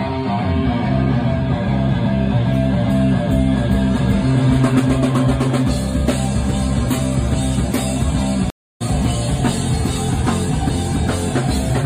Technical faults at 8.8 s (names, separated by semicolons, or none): stream reconnect